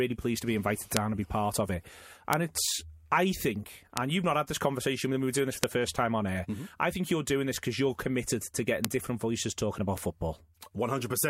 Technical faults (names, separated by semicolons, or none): bit error spike